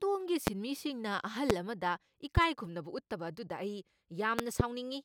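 Loud pops at 0.47 to 0.50 s, 1.50 to 1.53 s, 2.37 to 2.40 s, and a double pop at 4.39 to 4.63 s sit some 20 to 25 dB above the speech. They are likely voltage pulses from a switch, plug or static. Each shows as a tall waveform spike and a thin vertical broadband stripe on a spectrogram.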